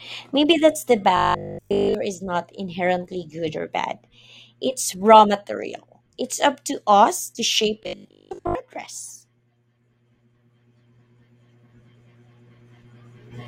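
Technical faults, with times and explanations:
1.17–1.95 s and 7.83–8.55 s, robotic sound from repeated short buffers: after "that's the" and "to us to shape", the speech turns into a rigid metallic buzz at 50 Hz. That points to a 20 ms slice looping, likely while fresh audio arrived late. The first stretch is nearly all repeats, the second mostly.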